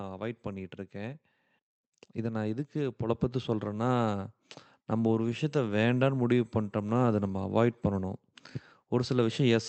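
At 3.09 s the microphone volume is stepped up. The input gain jumps about 6 dB in a single step, and the background noise rises with the speech and stays raised. Someone leaning closer would lift only the voice, so this shared, instant jump sets it apart. Throughout, the call path's band limit near 8 kHz is audible.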